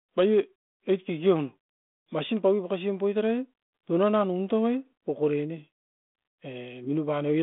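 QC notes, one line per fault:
Nothing stood out on listening to this speech recording.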